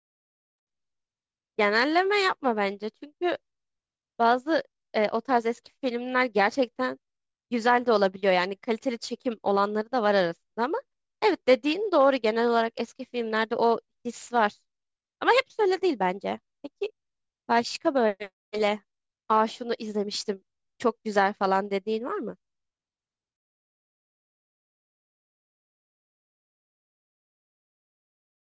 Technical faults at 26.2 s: none

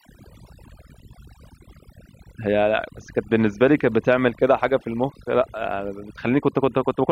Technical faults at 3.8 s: overdone noise removal

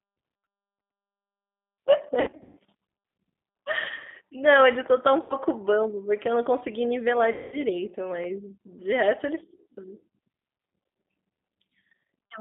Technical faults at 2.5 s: G.729 codec; VoIP packet loss concealed by the speech codec

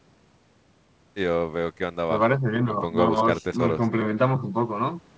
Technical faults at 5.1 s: none

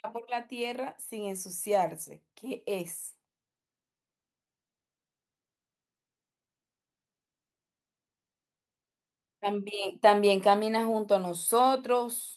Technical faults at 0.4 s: automatic gain rising

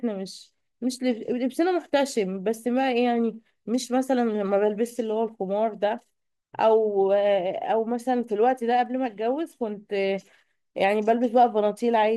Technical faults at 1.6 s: none

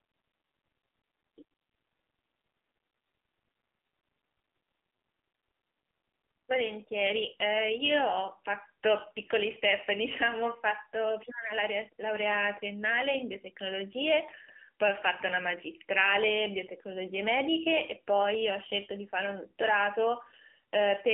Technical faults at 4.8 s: AMR narrowband mobile codec

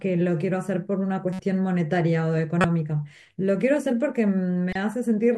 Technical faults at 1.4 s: corrupt frame decoded

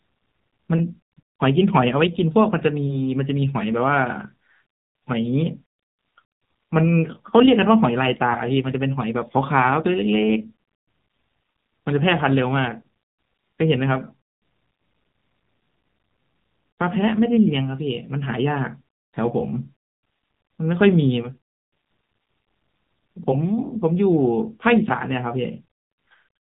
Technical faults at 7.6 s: AMR narrowband mobile codec

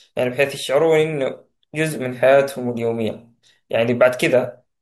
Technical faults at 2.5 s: none

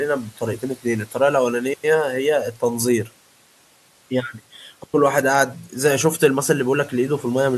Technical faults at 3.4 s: none

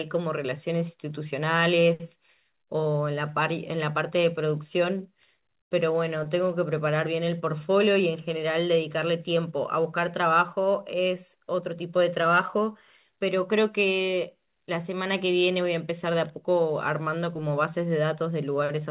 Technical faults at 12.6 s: none

